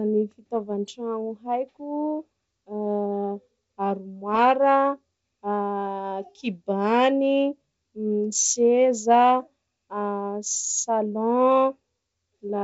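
The speech comes through G.722 wideband telephone coding at 64 kbit/s, with audio bandwidth reaching up toward 7 kHz and coding effects at most faint, and no technical fault can be heard in the signal.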